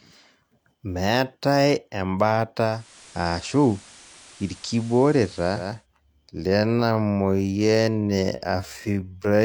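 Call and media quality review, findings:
Digital radio blending to analogue, 2.61–5.87 s: receiver lost digital, cross-faded over about 409 ms to the FM simulcast and back. Hiss roughly 25 dB under the speech, level steady.

Time-stretched section, 6.45 s to end: speech pace drops to 0.51x, roughly half speed, pitch unchanged. Speech drags. Likely from stretch software repeating short segments to fill length while holding pitch.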